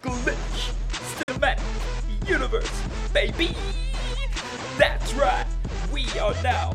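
There's a short hole in the sound from about 1.23 to 1.30 s, where the output just cuts to silence and then picks up further along, as if it kept playing underneath. That's likely a Bluetooth dropout, with packets arriving too late to play; around 46 ms of audio goes missing.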